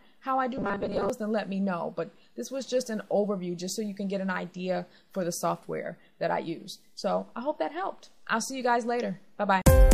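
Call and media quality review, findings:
Robotic sound from repeated short buffers, 0.58 to 1.10 s. A rigid, metallic 200 Hz buzz sits on the audio. Likely a starved playback buffer that loops a 5 ms chunk through most of that stretch while the real audio gets skipped.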